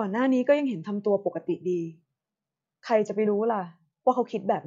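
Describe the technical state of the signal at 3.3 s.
At 3.25 s the speech jumps forward: compressed frames are skipped there. About one frame's worth of audio, roughly 20 ms, never reaches the output. The jump length matches a single frame of about 23 ms. The result is a small discontinuity in the speech.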